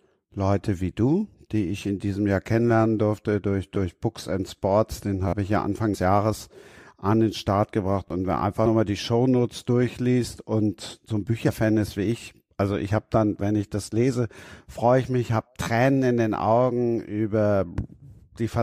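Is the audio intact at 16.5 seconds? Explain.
Yes, at 16.5 seconds the speech plays through cleanly, with no dropout, click, distortion or other fault to be heard at that moment.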